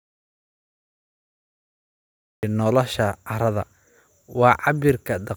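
From the very first moment until 2.43 s the clip is an audio dropout to silence: the speech is already missing when playback begins and only starts at 2.43 s, cutting in abruptly mid-flow. The gap is silent, with no hiss or room tone at all, which sets it apart from a natural pause or a gated quiet passage. The input was likely lost, through a disconnected device, failed link or mute, while recording continued.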